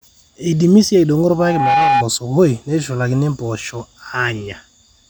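From 1.32 to 2.05 s, a loudspeaker feedback squeal: the microphone re-amplifies its own loudspeaker, and an 813 Hz tone swells in under half a second to sit a few decibels above the speech.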